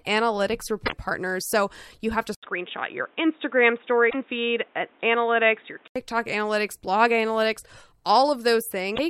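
Right at 0.82 s there's a quick glitch lasting until about 0.93 s. That's damaged data in the compressed stream: a stretch of the file was corrupted, so the decoder choked on those frames, lost its place and hunted for the next good frame header. You hear a short garbled blip. The same thing happens again from 4.06 to 4.15 s and once more near the end, 8.92 to 8.99 s.

Just after "you have to", at 2.35 s, there's a gap of about 80 ms and then the speech goes dull and boxy, with nothing above 3.8 kHz. It stays that way until 5.96 s, when the brightness comes back. The loudness barely moves, but a new noise floor appears, sitting roughly 35 dB under the speech. That's most likely the input switched to a poorer device, say a headset in call mode, which passes a narrower band and brings its own hiss. The 4.06 s glitch lands in the middle of that stretch.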